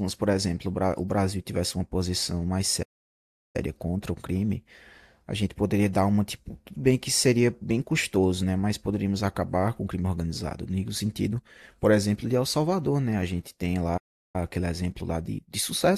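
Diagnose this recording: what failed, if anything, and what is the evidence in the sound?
The speech cuts to silence mid-flow from 2.82 to 3.56 s, about 0.72 s, and again from 13.97 to 14.36 s, about 0.37 s, then carries on. This is a playback stall, likely the player starving for data or its output thread being blocked.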